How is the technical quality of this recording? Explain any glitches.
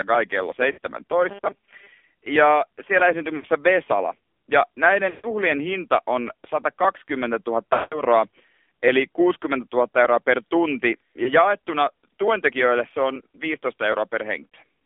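The recording has clearly limited technical quality. It is speech carried over a narrowband mobile link. There is audible codec damage throughout, repeated short dropouts, and one stretch of robotic buzzing.

The AMR narrowband mobile codec is present across the whole clip. The audio occupies only about 250 Hz to 3.5 kHz, so the voice sounds thin and boxed-in, with no air or sibilant brightness. The codec rebuilds speech from a vocal-tract filter driven by a few pulses per subframe, and the coarse quantisation gives the voice a buzzy, synthetic edge. That damage points to one of the lower AMR modes, around 7.4 kbps.

Lost AMR speech frames occur six times:
0.72–0.78 s, just after "kai kello"
3.36–3.46 s
5.10–5.27 s, just before "hinta on"
7.74–8.01 s
11.24–11.31 s, between "euroa per tunti" and "jaettuna tuentekijöille se on"
14.48–14.54 s

Each time, the decoder received corrupted frames and concealed them by repeating the last good pitch and filter settings at decreasing gain. 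The shortest gaps sound like a brief dip or warble. The longer ones, at 5.10 s and especially the 180 ms gap at 7.74 s, smear the voice into a drawn-out tone that fades toward silence before speech returns weak and rough.

Robotic sound from repeated short buffers runs from 1.29 to 1.88 s. Over that half-second the voice becomes a rigid, metallic buzz pitched at 200 Hz. It still loosely tracks the syllables. The likely cause is playback starving for new data and looping the last 5 ms block to fill the gap. That repetition period imposes the fixed 200 Hz tone, and for most of the stretch the real speech is skipped.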